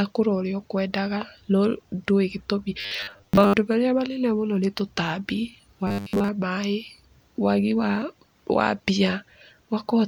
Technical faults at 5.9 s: robotic sound from repeated short buffers

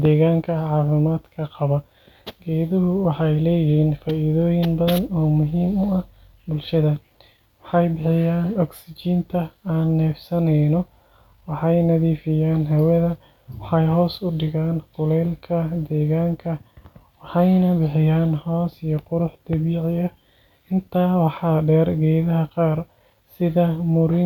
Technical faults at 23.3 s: none

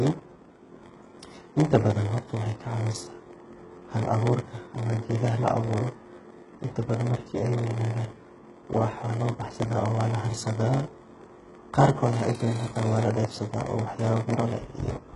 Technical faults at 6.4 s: block size mismatch (padded); HE-AAC compression

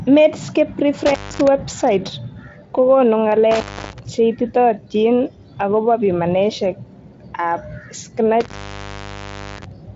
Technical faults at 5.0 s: none

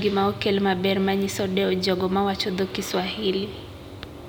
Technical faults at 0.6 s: none

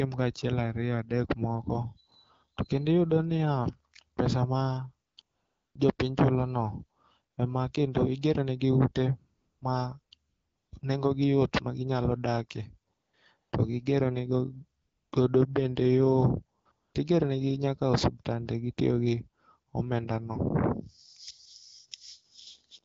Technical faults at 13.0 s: AMR comfort noise

